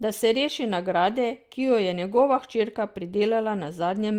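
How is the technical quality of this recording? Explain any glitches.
One glitch stands out: from 2.09 to 2.19 s the speech turns briefly rougher and noisier without dropping out, a lost packet rebuilt from error correction, concealing about 60 ms.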